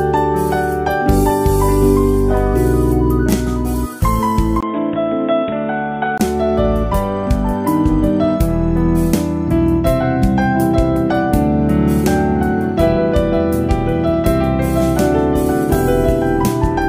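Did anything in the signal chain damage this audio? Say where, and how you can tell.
Yes. From 4.61 to 6.20 s, after a 20 ms gap, audio turns boxy and quieter with nothing above 3.8 kHz: likely input switched to a poorer device.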